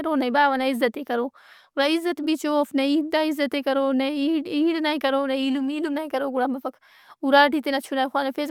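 No technical faults are audible.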